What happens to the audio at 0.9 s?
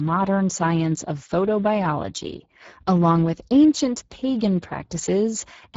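At 0.9 s the speech carries Speex codec damage, present across the whole clip. Bitrate fits roughly 10 kbps, leaving the CELP excitation starved, so speech sounds noisy and hoarse, with nothing above 7.7 kHz.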